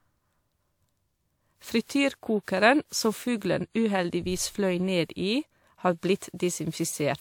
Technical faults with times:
0.00-7.21 generation loss

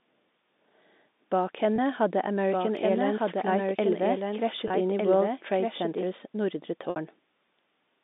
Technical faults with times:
1.76-1.78 packet loss with pitch repetition
2.51-6.03 doubled audio track
4.68-4.70 packet loss with pitch repetition
6.90-6.96 packet loss with pitch repetition

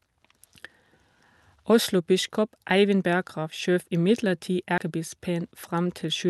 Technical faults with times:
0.00-6.29 clock drift between sender and receiver
0.01-6.27 repeated timing corrections
1.24 dropped buffer (overrun)
3.50 dropped buffer (overrun)
4.78 dropped buffer (overrun)

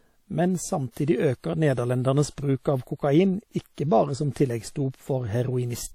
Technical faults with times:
0.00-5.94 WMA compression
0.91-0.96 pre-echo

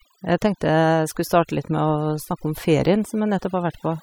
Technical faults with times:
0.00-4.03 overdone noise removal

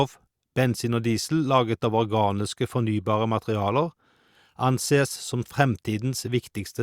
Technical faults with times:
none

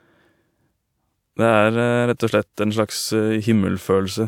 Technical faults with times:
none

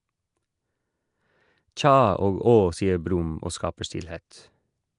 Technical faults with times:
0.00-4.98 Nellymoser compression
4.30 pre-echo

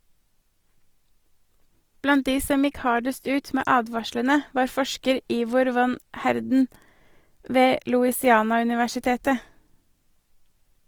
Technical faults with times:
0.00-10.88 Opus compression

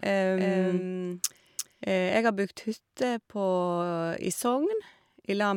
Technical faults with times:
0.00-2.18 doubled audio track

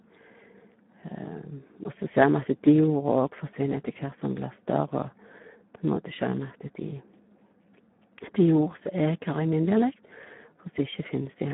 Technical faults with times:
0.00-11.53 Speex codec

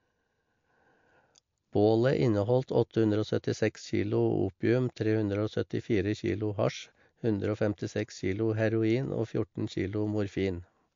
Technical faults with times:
0.00-10.96 MP3 compression

